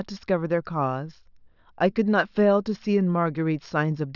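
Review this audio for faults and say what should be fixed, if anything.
No faults turn up anywhere in this speech recording. Nothing needs to be fixed.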